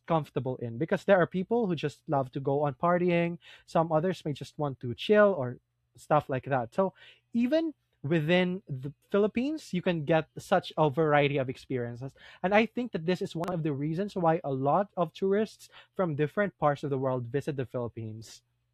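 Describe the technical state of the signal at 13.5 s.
At 13.5 s the signal shows chunks out of order, from 13.44 to 13.52 s, between "think that this is" and "of the reasons why". One 40 ms block of speech plays one block late, after the block that should follow it. There are three hard joins, and the brief stretch sounds jumbled. Unlike a dropout, no audio goes missing and there is no gap or silence: the right sound is there, in the wrong order.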